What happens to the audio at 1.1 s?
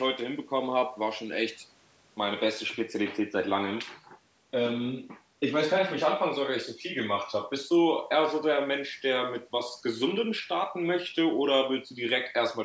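Nothing goes wrong at 1.1 s: the speech passes through intact, carrying only the ordinary call microphone processing, whose high-pass filter trims the lowest bass and whose band ends at 8 kHz.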